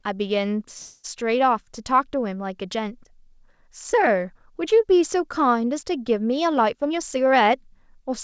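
From 0.78 to 1.06 s the speech stalls and the last sound is stretched into a fading buzz or hiss for about 257 ms, then carries on exactly where it left off with nothing lost. This is a call audio freeze, likely from delayed packets emptying the jitter buffer, so the receiver filled the wait and everything after it slipped later by that amount.

From 6.46 to 8.10 s the speech sounds hurried, running at about 111% speed with unchanged pitch. This jitter buffer speed-up comes from the receiver trimming short pitch-period slices again and again, taking out roughly a fifth of a second to bring the built-up delay back down. Throughout, the audio has nothing above 8 kHz, which fits a wideband call codec such as G.722.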